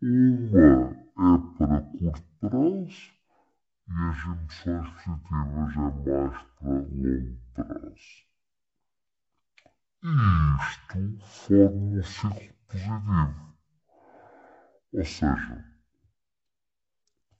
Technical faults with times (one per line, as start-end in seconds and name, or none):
0.00-17.39 stereo read as mono